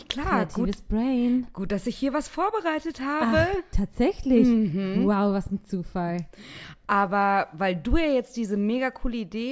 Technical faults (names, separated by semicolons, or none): none